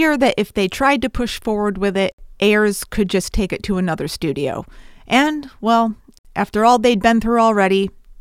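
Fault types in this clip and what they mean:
Gap at a join of encoded pieces: the speech was encoded as separate segments and butted together untrimmed, so each join carries the encoder's start-up delay and final-frame padding as dead air. Two silences open in continuous speech, at 2.12 to 2.18 s (66 ms) and 6.18 to 6.25 s (64 ms), spaced 4.0 s apart. Both have smeared edges, and the speech resumes exactly where it broke off.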